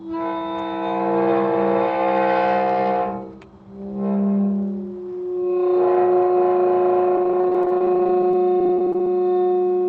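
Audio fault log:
7.16 to 9.07 s, repeated packet loss (robotic sound): about 30 short dropouts, none longer than roughly 23 ms, each patched by stretching the previous bit of sound. About 18% of that stretch is filled in, so it turns choppy against the 8 kHz call-path audio.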